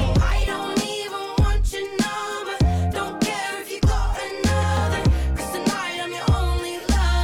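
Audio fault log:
No technical faults can be heard anywhere in the recording; the signal holds steady and continuous at every point.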